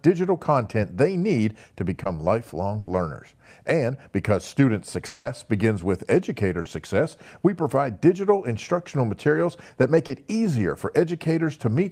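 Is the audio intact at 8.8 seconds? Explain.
Yes, at 8.8 seconds the speech plays through intact, with no dropout, click, distortion or other fault.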